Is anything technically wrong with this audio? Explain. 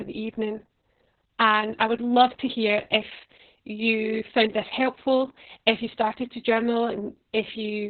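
Yes. Throughout the clip, the speech sounds muffled, hoarse and slightly robotic, with nothing above about 4.5 kHz. This is heavy Opus voice compression. The SILK predictive coder has dropped to narrowband and coded the excitation coarsely, which fits a bitrate around 6 kbps.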